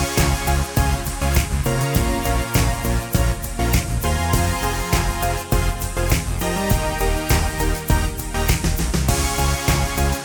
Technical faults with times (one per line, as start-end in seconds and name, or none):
none